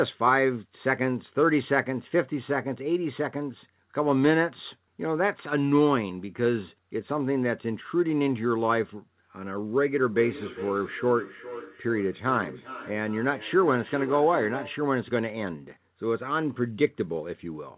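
From 9.96 to 14.88 s there is feedback echo between two devices: a second device in the room replays the speech into another microphone, so each phrase returns about every 0.4 s, the loudest repeat about 14 dB down. Unlike reverb, the repeats are distinct and evenly spaced.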